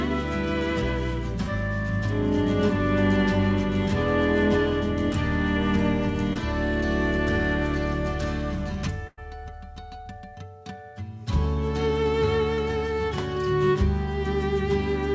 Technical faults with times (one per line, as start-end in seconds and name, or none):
6.33-6.37 short concealed packet loss
9.07-9.19 burst of packet loss
12.55-12.59 short concealed packet loss